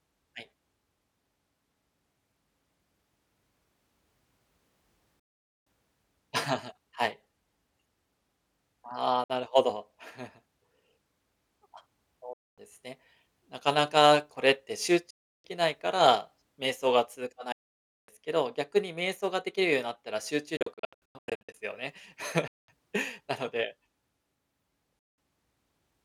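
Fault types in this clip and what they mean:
Bluetooth dropout: the speech falls silent eight times, with gaps of 0.06 to 0.56 s and one broken cluster around 20.6 to 21.5 s, likely from wireless packets arriving too late. Speech resumes as if it had played on, leaving flat, empty blocks on waveform and spectrogram.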